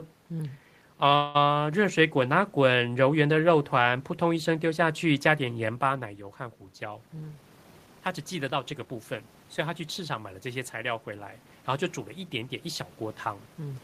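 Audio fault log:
1.15 to 1.37 s, call audio freeze: the sound stalls for about 0.19 s and is carried on as a fading buzz or hiss that trails off from the last moment heard. The likely cause is packets held up on the network until the jitter buffer ran dry, so the receiver extended what it already had. When the delayed audio arrives it resumes exactly where it stopped, so nothing is lost, but everything afterwards now plays about 193 ms later than before.
7.07 to 8.95 s, jitter buffer speed-up: for nearly two seconds the speech runs about 10% fast while its pitch stays unchanged, giving a hurried delivery. The receiver had built up more buffered audio than it wanted and worked it off by cutting many tiny slices, each a pitch period or so long, out of the waveform. In total it trims away roughly a fifth of a second, pulling the playout delay back toward its target.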